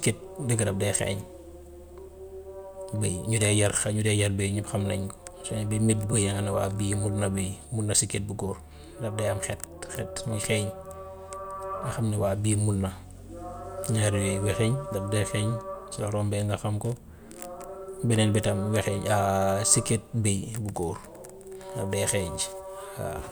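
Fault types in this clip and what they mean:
No fault types are present in this clip.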